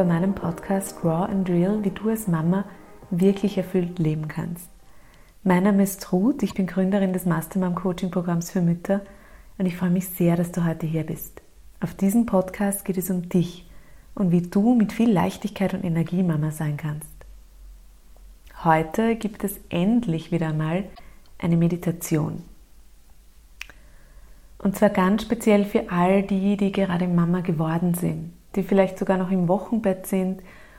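At 6.47 s, lasting about 60 ms, and again at 20.91 s, lasting about 80 ms, the audio breaks into a short chirp or squawk typical of damaged data in a compressed stream. Corrupted bytes in the encoded stream make the decoder misread or reject the affected frames and lose sync until it finds the next valid frame header, so each glitch is brief.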